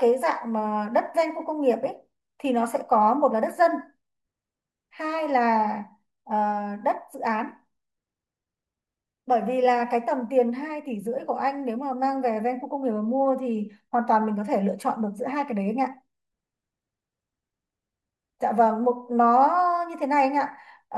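No technical faults can be heard anywhere in this speech recording. Nothing in the signal path calls for comment at any point.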